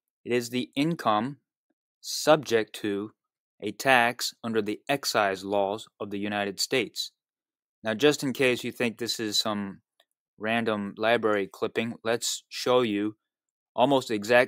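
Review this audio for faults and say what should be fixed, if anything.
Nothing to fix: no faults detected anywhere in the clip.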